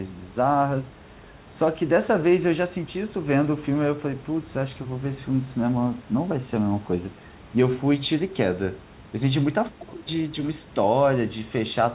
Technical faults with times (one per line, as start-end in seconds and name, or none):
none